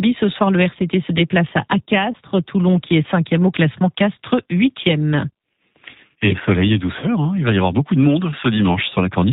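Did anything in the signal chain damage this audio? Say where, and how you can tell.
Yes. At the codec stage, the whole clip runs through G.729, likely the G.729A variant at 8 kbit/s. Its damage is plainly audible throughout. The codec rebuilds the speech from a vocal tract filter model, a pitch predictor and a handful of pulses per 10 ms frame, so the voice comes out rough and synthetic rather than natural. Nothing above 4 kHz survives, which leaves the top of the band empty.

On the network side, there is VoIP packet loss concealed by the speech codec, at about 2.12 to 2.17 s and again at about 7.01 to 7.07 s. Each gap is about 20 ms of missing audio, which fits a single lost packet. With no new data, the decoder extrapolated from its last pitch and filter settings while lowering the gain, so the sound smears into a buzzy tone or coloured noise. Each frame builds on the previous one, so the distortion spreads past the gap itself, to roughly 46 ms and 62 ms.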